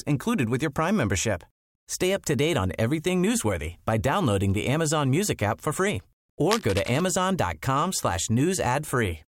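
From 6.50 to 7.03 s, just after "app for free", a burst of cable scratch noise rides over the speech for about half a second: a dry, crackling rustle roughly 10 dB below the voice. It is likely a worn cable or connector being moved, its contact resistance jumping erratically. On a waveform it shows as dense, jagged spikes of uneven height; a spectrogram shows scattered broadband vertical streaks across the whole frequency range for that span.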